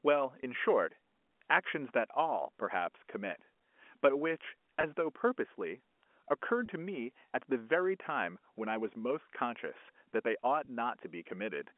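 Packet loss with pitch repetition occurs at 0.42 s (10 ms), then at 4.81–4.83 s, 6.66–6.68 s and 10.65–10.67 s (20 ms each). The receiver bridges each gap by repeating the last pitch period, heard as a brief, slightly held, buzzy note.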